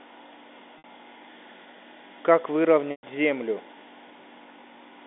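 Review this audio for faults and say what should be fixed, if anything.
At 0.78 to 0.84 s the sound briefly holds on a slightly buzzy, sustained tone, and at 2.91 to 3.03 s it buzzes, fades to silence and then cross-fades back in. Both are packet loss with pitch repetition. The receiver fills each gap of 60 ms and 120 ms by repeating the last pitch period. The longer gap outlasts the roughly 50 ms fade.

A larger jitter buffer or forward error correction on the network path would prevent these dropouts.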